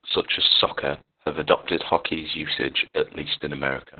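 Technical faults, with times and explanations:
Throughout, Opus voice compression: the speech comes out muffled, hoarse and a bit robotic. The band is cut to narrowband, about 4 kHz, and the excitation is coded very coarsely in SILK mode, which fits a bitrate around 6 kbps with long 60 ms frames.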